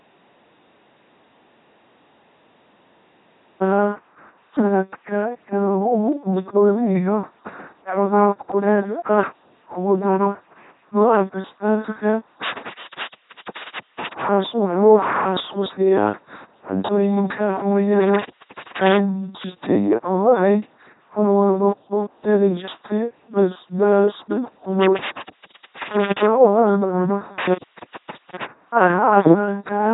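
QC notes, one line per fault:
Throughout: LPC-10 vocoder. The speech is heavily damaged, buzzing and mechanical, with stray buzz or hiss wherever the voiced/unvoiced decision goes wrong and nothing above 3.8 kHz. At 2.4 kbit/s, each moment is rebuilt from a short all-pole filter driven by either a pulse train or noise.
0.00–3.61 s: audio dropout to silence. The clip opens in silence, with no room tone at all, and the speech only arrives at about 3.6 s. The likely cause is lost input, such as a disconnected device or mute, while recording carried on writing silence.
12.44–14.24 s, 18.01–18.98 s, 24.83–26.26 s, 27.40–28.46 s: intermittent contact. The speech cuts away with crackle at each edge, leaving faint hiss during gaps of about 1.29 s, 0.49 s, 0.66 s and 0.79 s. A loose cable or plug is opening and reclosing the signal path.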